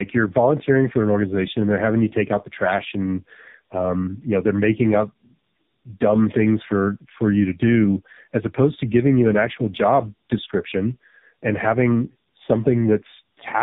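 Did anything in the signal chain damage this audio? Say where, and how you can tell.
Yes. The damage is tandem speech coding at the codec stage, and it lasts the whole clip. The speech is rough, muffled and warbly, with nothing above 3.8 kHz. That fits two low-rate AMR-NB passes in a row, each re-coding the previous coder's degraded output.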